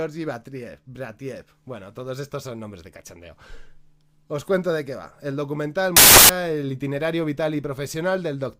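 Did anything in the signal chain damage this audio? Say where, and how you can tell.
Yes. The damage sits in sample-format conversion. From 5.97 to 6.29 s, about a third of a second, the sound turns into loud, harsh broadband noise. That is samples built from the wrong bytes. Misassembled bytes let the fast-changing low bits dominate each value.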